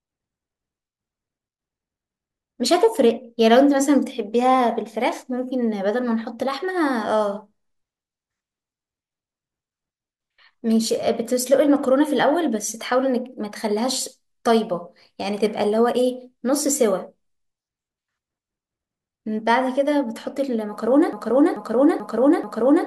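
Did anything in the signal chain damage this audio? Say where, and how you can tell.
Yes. A broken-record loop starts at 21.13 s and runs to the end of the speech: a 0.44 s fragment repeats exactly four times back to back. This likely points to a stalled player, encoder or stream buffer resending its last chunk, so the audio that belonged there is lost.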